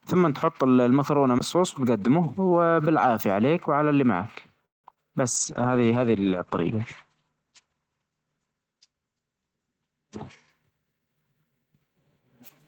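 CD skip at 1.39 to 1.41 s: the laser appears to have jumped to a neighbouring turn of the disc's spiral, so the player mutes very briefly and resumes elsewhere. You hear a tick and the speech lurching forward or back, not continuing smoothly.

Call audio freeze from 4.65 to 4.86 s: the last sound is stretched and decays, filling about 184 ms, most of it roughly 170 ms of silence. Then the speech carries on from where it stopped, with nothing lost but a gap inserted. The likely cause is delayed packets draining the jitter buffer.

Short concealed packet loss at 4.90 to 4.92 s and again at 4.94 to 4.98 s: each time about 20 ms of audio failed to reach the decoder. The receiver patched the holes by extending the preceding sound, heard as two quick smears or wobbles just after the freeze.

Call bitrate drop from 5.38 to 10.96 s: the encoder was pushed from 32 kbps down to 10 kbps and stayed near the bottom for about 4.3 s. 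Bandwidth shrinks from 20 kHz to 8 kHz, so the speech turns muffled, coarse and watery.

Jitter buffer speed-up from 10.63 to 11.89 s: the receiver trimmed short pitch-period slices, about 150 ms in total, to reduce excess buffered delay. The speech plays at roughly 113% speed with unchanged pitch and sounds noticeably hurried.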